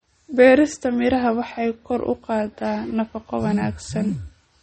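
Throughout the speech the sound is watery and swirly, with smeared attacks and nothing above about 8.4 kHz, so s sounds turn dull and chirpy. This is likely MP3 compression at a low bitrate, perhaps around 32 kbps, cutting treble and dropping weak frequency lines frame by frame.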